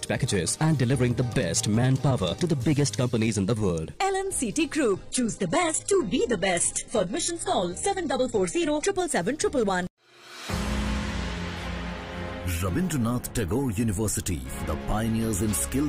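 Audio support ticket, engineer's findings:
Adaptive stream at a lower bitrate, 4.93–8.93 s: connection slowdown forced a switch to a low-rate rendition, consistent with moving from roughly 96 kbit/s AAC to about 12 kbit/s HE-AAC. Sudden, gapless drop; nothing above 11.1 kHz, heavier codec artefacts.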